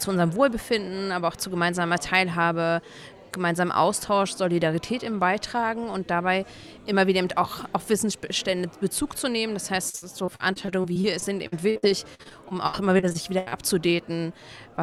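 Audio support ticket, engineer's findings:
Repeated packet loss (robotic sound), 9.89–13.54 s: choppy stretch with pieces missing; network/jitter-buffer path. About two dozen holes, longest 79 ms, patched by extending the preceding sound, so concealment fills about 23% of the span. Unlike steady codec artefacts, it comes in bursts.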